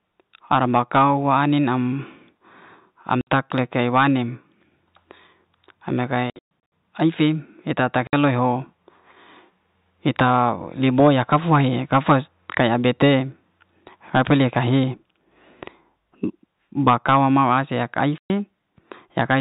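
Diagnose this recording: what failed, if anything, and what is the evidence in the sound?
The failure is at the network stage: packet loss filled with silence. The sound drops to dead silence with hard edges at 3.21 to 3.27 s, just before "le ay'wanem", and at 8.07 to 8.13 s, right after "ai'fe eta ta". A 0.12 s hole at 18.18 s follows "mau asi yak ai". Between 6.3 and 6.72 s, about 270 ms disappears in scattered gaps. Every gap length is a multiple of 30 ms, which fits 30 ms packets that the receiver replaced with silence instead of concealing them. The narrowband G.711 telephone coding underneath plays through cleanly between the dropouts.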